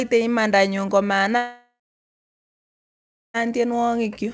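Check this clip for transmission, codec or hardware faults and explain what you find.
One fault stands out, a long network dropout, heard in speech carried over a G.722 call path at 64 kbps that has no content above 8 kHz.

From 1.37 to 3.37 s, the sound breaks off. The last fragment of speech stretches into a fading buzz, then about 1.6 s of near-silence follows before speech returns with the gap unrecovered. The likely cause is roughly two seconds of lost packets, with concealment filling about 1.97 s of that with a tail that fades out.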